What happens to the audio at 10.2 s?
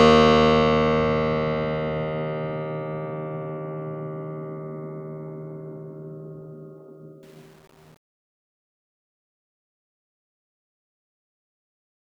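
At 10.2 s you're deep in the truncation distortion on the fade-out, which runs from 7.23 s to the end at 12.05 s and is at its worst from 7.28 s onward. The music is fading out from around 7 s, but the gain stage is keeping too few bits and adding no dither, which fits an 8-bit path. As the level drops toward the smallest step, the waveform collapses into coarse square steps, so the tail sounds gritty.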